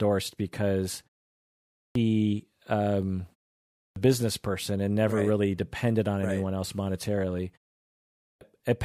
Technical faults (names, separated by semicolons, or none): clipped start after a pause